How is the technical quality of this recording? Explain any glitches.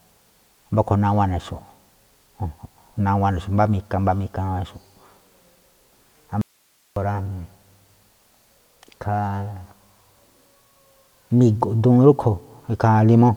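The recording has one clear glitch, an audio dropout to a faint residue. It runs from 6.41 to 6.96 s, so about 550 ms of speech is lost. The speech stops abruptly mid-flow and comes back just as suddenly. Only a faint hiss fills the gap, roughly 40 dB below the speech. The likely cause is a brief loss of the signal feeding the input, while the path after the break stayed live and kept passing its own noise.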